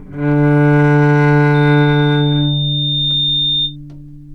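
A recording of everyday sounds with loudspeaker feedback squeal from 1.54 to 3.76 s: a single 3.6 kHz tone swells over roughly a second and a half to about the level of the sound itself, as the microphone-to-speaker loop exceeds unity gain there.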